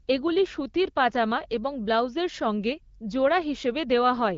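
Nothing goes wrong here at all: the speech just sounds like ordinary HD Voice, with the AMR wideband codec's usual top end stopping around 7.5 kHz and the light coding texture you'd expect at about 12.65 kbit/s.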